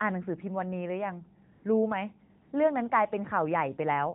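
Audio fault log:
1.52–1.64 s and 2.42–2.52 s, AMR comfort noise: the phone's voice activity detection judged the talker silent and stopped sending speech frames for about 120 ms and then 100 ms. The receiver filled each gap with smooth synthetic noise, so the real background briefly drops out and a flat, even hiss switches in and out.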